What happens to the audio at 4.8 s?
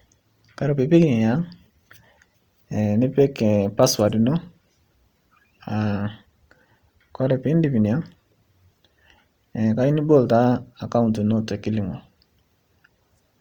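At 4.8 s the speech carries the same Opus compression damage heard across the whole clip, not a separate event there. Every band keeps its energy, but short of bits the encoder fills bands with noise or folded copies of lower ones, so harmonics turn grainy and rough, consistent with roughly 24 kbps in the likely CELT music mode. A spectrogram shows content reaching 20.1 kHz, with smeared, speckled upper bands instead of clean harmonic lines.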